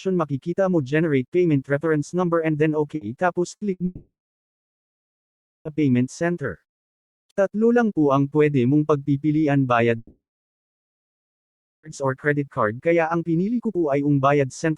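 Bursts of packet loss at 2.95, 3.55 and 3.73 s: each time about 60 ms went missing, and the receiver stretched the last sound into a brief fading buzz or hiss before jumping ahead. Long network dropouts, likely, follow from 3.85 to 5.68 s and from 9.97 to 11.86 s. The sound carries on briefly as a fading tail, then goes silent for about 1.5 and 1.65 s respectively, and it resumes with roughly 1.8 and 1.9 s lost respectively.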